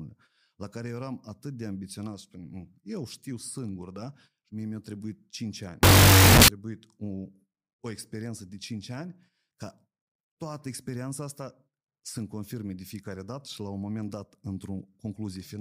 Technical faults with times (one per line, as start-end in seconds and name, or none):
5.83-6.48 wrong sample width